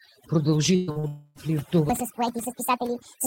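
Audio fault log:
throughout, overdone noise removal: the background drops and breaks up into twinkling specks. A noise reducer set far too strong is switching individual frequency bands down or off whenever they sit near its noise estimate, so quiet parts of the speech vanish with the noise. Unlike a network fault, this colours the whole clip evenly instead of breaking it at particular moments.
0.75 to 0.90 s, burst of packet loss: for about 120 ms the last sound is stretched out and faded, heard as a held buzz on voiced sound or a dying hiss otherwise, then the speech picks up further along with roughly 120 ms gone. Several consecutive packets were lost or arrived too late, and the receiver kept extending what it had. It is longer and more obviously held than the brief smears that follow, yet never reaches silence.
0.91 to 0.98 s and 0.99 to 1.06 s, short concealed packet loss: two quick smears or wobbles, each about 40 ms, where a sliver of the call missed the decoder. 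The receiver continued the previous pitch or shaped noise and blended back into real audio, so a short consonant can disappear. These are far briefer than the burst just before, so they register as a smear, not a held tone.
1.07 to 1.38 s, long network dropout: the sound is carried on as a fading buzz or hiss for about 0.3 s before the speech returns further on, with that stretch missing. The likely cause is an extended gap in which no audio arrived. It differs from the earlier burst by running longer, about 280 ms concealed, though here the fill never quite decays to silence.
1.90 s to end, section at the wrong speed: from here the speech becomes high and hurried, playing about 1.6 times too fast with the pitch raised by roughly seven semitones. Speed and pitch rise together at once, which likely comes from this part being played against the wrong clock. That joint shift separates it from the dropouts, which remove audio but leave pitch and tempo untouched.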